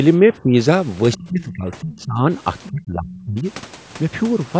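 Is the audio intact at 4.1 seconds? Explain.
Yes, the speech at 4.1 seconds is intact, with nothing there beyond the ordinary call microphone processing that trims the lowest bass and leaves nothing above 8 kHz.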